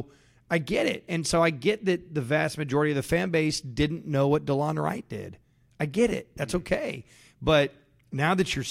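No technical faults can be heard anywhere in this speech recording. There is nothing to report at any point along its timeline.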